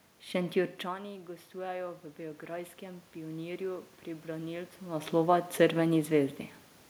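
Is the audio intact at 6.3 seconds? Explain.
Yes, the audio is intact at 6.3 seconds, with no system fault at that moment.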